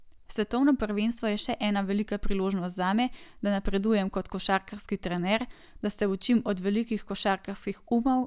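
No technical faults occur anywhere in the recording, so there is nothing to describe in time order.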